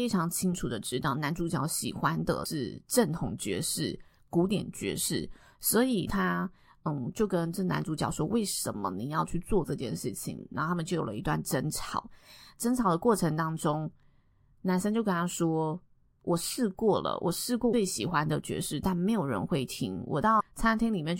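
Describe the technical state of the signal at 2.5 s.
Damaged data in the compressed stream sits at 2.42 to 2.46 s, just before the 2.5 s mark, in this speech clip. For roughly 40 ms the encoded frames arriving at the decoder are corrupt, with bytes missing, zeroed or overwritten, so it misreads them, loses its frame alignment and hunts for the next valid header before normal decoding resumes. The result is a brief chirp, squawk, click or short hole cutting across the speech at that point.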